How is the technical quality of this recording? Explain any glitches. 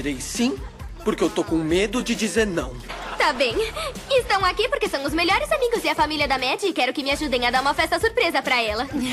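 The recording has one glitch, a DC step at 3.36 s. At that instant the waveform's zero line jumps by about -31 dBFS, as happens when a converter recalibrates or an offset input is switched in, and the offset then drains away through a 20 Hz high-pass. It is heard as a single low thump while the sound continues unchanged. A waveform shows the trace lifting off centre and sagging back, and a spectrogram shows a brief broadband flash concentrated at the lowest frequencies.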